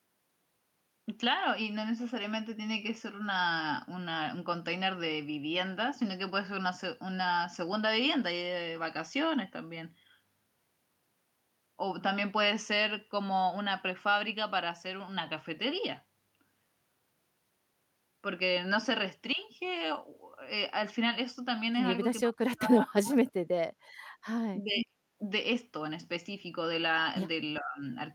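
From 22.29 to 23.83 s the speech sinks steeply, by something like 40 dB. The same hard dip returns from 24.56 to 25.04 s. This is speech suppressed in double talk: with both ends talking, the echo canceller likely could not tell this talker apart from its loudspeaker echo and turned everything down.

Inside that second dip, from 24.81 to 24.86 s, a short delayed copy of the voice slips through, about 409 ms late and only a little quieter than the speech. This is echo leak. The far end's canceller likely left part of its microphone pickup of the loudspeaker in place and sent it back.

From 27.6 to 27.82 s a brief, shallower dip of roughly 20 dB pulls the speech down, likely the same double-talk suppression acting more gently.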